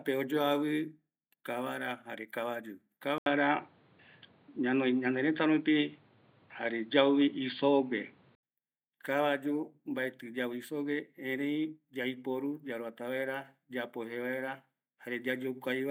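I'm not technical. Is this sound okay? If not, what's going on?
No. Just after "jare kabayu", at 3.18 s, the recording most likely switched its input to a poorer device, such as a different microphone or a headset. From there until 8.43 s, the speech sounds dull and boxy because everything above 4.8 kHz is missing. The volume shifts a little, and a faint new background noise appears. There's a brief gap of about 80 ms at the switch, and the sound clears up again at 8.43 s.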